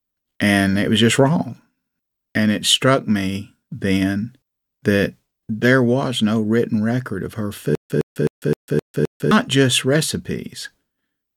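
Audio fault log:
7.75–9.31 s, stutter with silent gaps: right after "written record of her", a 112 ms fragment of the speech plays six times, each followed by 148 ms of dead digital silence, so it returns every 260 ms at an even pace. The likely cause is a stalled stream replaying its last fragment at each retry and then running empty. The true silence in each gap and the identical repeats set it apart from a plain dropout or an echo.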